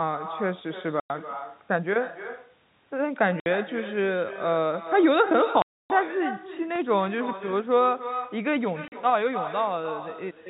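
Speech over a telephone-band line, where every phrase is trailed about a third of a second later by a quieter, thinner copy at about 11 dB down. That is echo with no canceller: the far end plays the call through a loudspeaker, its microphone picks it up, and nothing removes it before it returns. The sound also drops to hard-edged silence at 1.0 to 1.1 s (100 ms), 3.40 to 3.46 s (60 ms), 5.62 to 5.90 s (280 ms) and 8.88 to 8.92 s (40 ms). This is packet loss filled with silence, and the gap lengths all fit 20 ms packets. Between 6.76 and 7.23 s there are four small regular ticks of uneven strength, the longest about 2 ms. These are CD scratch ticks, left where damaged data beyond the error correction was interpolated or muted once per disc turn. The G.711 telephone coding limits the sound to below 4 kHz.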